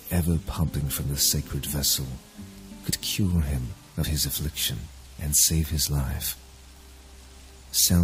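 Compressed frames skipped at 2.89–2.93 s, 4.01–4.06 s and 5.84–5.89 s: missing or rejected frames were never decoded, so the sound jumps ahead by about 50 ms, 50 ms and 20 ms.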